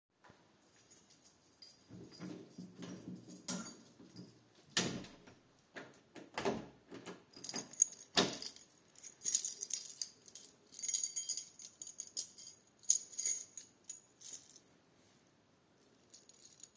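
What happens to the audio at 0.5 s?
Nothing goes wrong at 0.5 s; the sound there plays through intact, with no fault to be heard.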